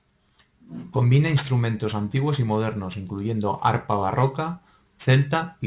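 Aliasing runs through the whole speech clip: content above a 4 kHz fold point has mirrored back into the band, which fits a drop from 44.1 kHz to 8 kHz without an anti-alias filter. Sibilants sound gritty and metallic, with folded energy roughly 25 dB below the signal.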